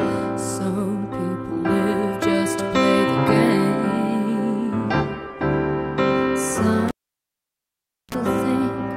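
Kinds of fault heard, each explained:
Cable pulled and plugged in: a live lead was pulled from its socket and pushed back in, so at 6.88 s a pop cuts the sound to near silence for about 1.2 s, then 34 ms of 60 Hz mains buzz as the tip touches, and a second pop.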